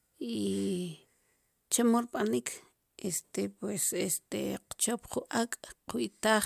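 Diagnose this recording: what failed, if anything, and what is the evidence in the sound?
Nothing in this speech recording points to a failure at any stage of the chain. There is no audible evidence to tie to a time, a stage or a mechanism.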